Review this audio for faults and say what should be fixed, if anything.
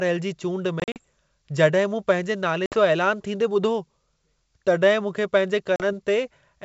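Packet loss on an ADPCM call leaves silent, hard-edged gaps: about 100 ms scattered across 0.80–0.98 s in runs up to 40 ms, then 60 ms at 2.66–2.75 s and 40 ms at 5.76–5.84 s. The receiving decoder's predictor and step size drift from the sender's, so each resumption is slightly distorted before settling. On a waveform these appear as flat-line dropouts. On a spectrogram they are full-band vertical blank strips over the clear G.722 band up to 7 kHz. Add jitter buffering with packet-loss concealment and decoder state resynchronisation.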